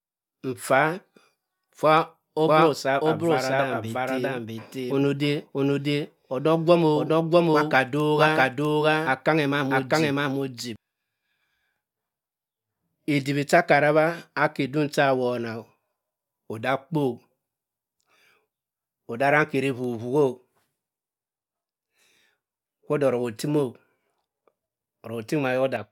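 From 2.48 s to 10.76 s the speech carries a doubled audio track: a second, full-band copy of the same speech runs about 0.7 s behind at much the same level, so every phrase is heard twice, overlapping itself. The likely cause is the signal being captured again through a slower path. Unlike echo or reverb, the copy has no decay or room colour, and it switches on and off abruptly.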